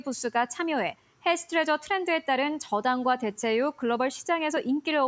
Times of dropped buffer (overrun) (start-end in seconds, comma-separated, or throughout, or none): 3.43, 4.57